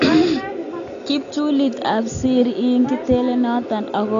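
Throughout, the speech is dull, with nothing above 7.1 kHz and a fizzy warble on sibilants that a plain low-pass lacks; likely low-bitrate AAC compression.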